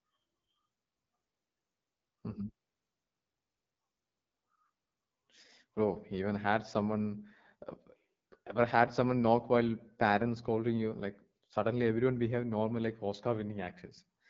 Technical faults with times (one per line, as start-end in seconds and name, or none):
0.00-14.29 AMR wideband (HD Voice) codec